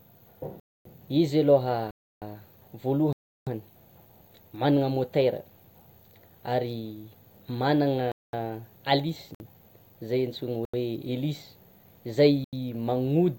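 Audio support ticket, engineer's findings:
Hard dropouts: 0.60–0.85, 1.91–2.22, 3.13–3.47, 8.12–8.33, 9.35–9.40, 10.65–10.74, 12.44–12.53 s (55–341 ms). Block of digital silence: likely output buffer not filled in time, zeros written; three lengths fit 4096- and 16384-sample blocks.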